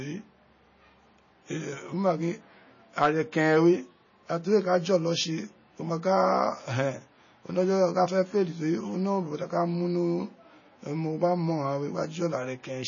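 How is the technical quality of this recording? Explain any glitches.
Technical quality is poor, with plainly audible coding damage throughout the speech. From start to finish nothing sounds above 7 kHz, and the audio has a watery, swirling texture. This is likely MP3 compression at a low bitrate, consistent with around 24 kbps. Starved of bits, the encoder cuts the treble at a fixed point and discards weak frequency lines, which flicker on and off from frame to frame.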